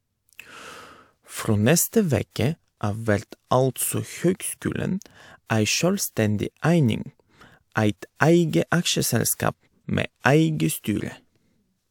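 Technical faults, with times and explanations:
No technical faults heard.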